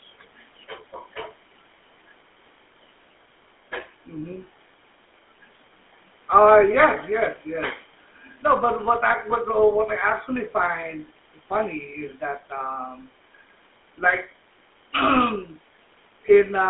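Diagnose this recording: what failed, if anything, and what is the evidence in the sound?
Codec stage: GSM full-rate coding throughout the speech, passing only about 250 Hz to 3.5 kHz, with plainly audible buzzy, gravelly roughness from pulse-excited vocal-tract modelling, consistent with 13 kbps.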